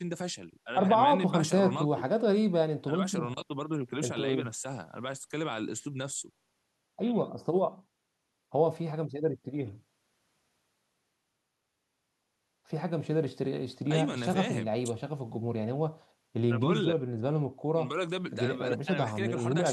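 No technical faults can be heard anywhere in the recording; the signal holds steady throughout, with nothing in it that points to a problem in how it was captured, processed or delivered.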